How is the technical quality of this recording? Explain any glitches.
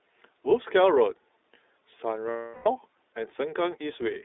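The recording is limited by narrowband coding throughout, plus one dropout in the second half.

The iLBC codec runs for the whole clip. It codes each short frame's excitation independently and passes only about 300 Hz to 3.7 kHz, so the speech sounds muffled and plainly rough and synthetic. This fits a 20 ms-frame, 15.2 kbps mode.

Lost iLBC frames occur from 2.30 to 2.68 s, a 360 ms gap, which points to a run of 20 ms frames. The decoder filled it by repeating the last pitch cycle mixed with noise and fading it. The result is a held, buzzy, breathy vowel, and the speech snaps back cleanly afterwards.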